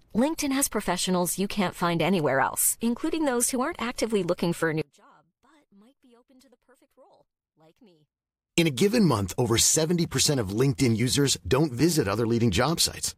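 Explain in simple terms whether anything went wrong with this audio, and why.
Likely one channel inverted: one side of the stereo was flipped, so from 4.8 to 8.6 s, just after "actively looking for a", the speech nearly cancels out.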